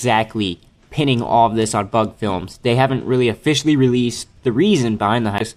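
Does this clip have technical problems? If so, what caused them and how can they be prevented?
Yes. At 5.37 to 5.42 s there is damaged data in the compressed stream: corrupted bytes make the decoder misread frames and lose sync, giving a brief glitch. A spectrogram shows a broadband smear, and the waveform a jagged discontinuity. Prevent it with checksummed storage and error-checked transfer.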